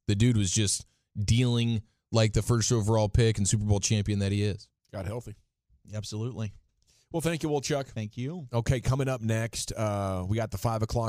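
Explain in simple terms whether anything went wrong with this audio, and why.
Nothing went wrong with this audio, so there is no problem here to explain.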